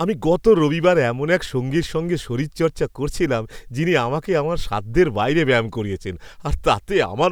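Nothing technical stands out in this bit of speech; there's no fault to point to anywhere in it.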